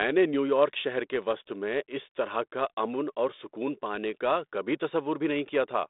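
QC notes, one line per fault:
No faults are present: the speech comes through a G.726 ADPCM telephone path at 32 kbit/s, which confines it to a band of about 250 Hz to 3.7 kHz and leaves only a light trace of the codec's coding on the signal.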